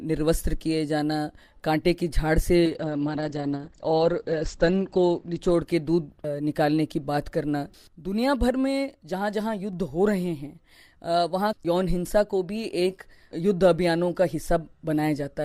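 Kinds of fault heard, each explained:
Call bitrate drop: the sound turns muffled and rough, losing everything above 8 kHz, as the encoder falls to what suggests roughly 12 kbps.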